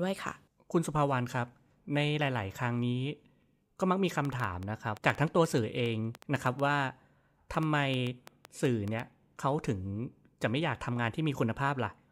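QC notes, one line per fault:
4.25–9.01 s, train of clicks: likely interference or a faulty interface injecting pulses, giving about 5 uneven ticks per second, roughly 30, well above the speech.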